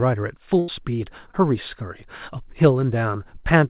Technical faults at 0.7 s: burst of packet loss

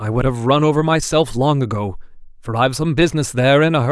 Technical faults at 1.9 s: none

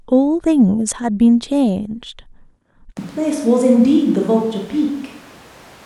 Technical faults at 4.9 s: switch to a distant microphone

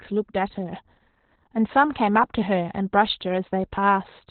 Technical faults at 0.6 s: Opus voice compression

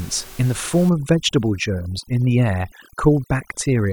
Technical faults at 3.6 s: overdone noise removal

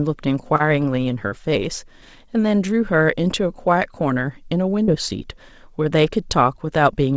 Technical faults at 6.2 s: none

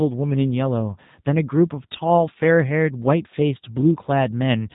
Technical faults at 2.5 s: G.729 codec

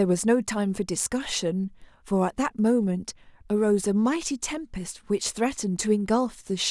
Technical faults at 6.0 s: none

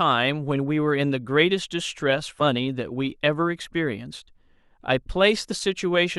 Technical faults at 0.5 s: none

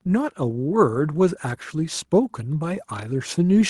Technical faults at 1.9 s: none

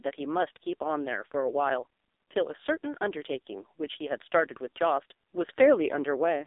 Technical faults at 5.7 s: AMR narrowband mobile codec

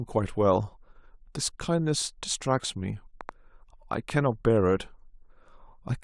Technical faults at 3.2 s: train of clicks

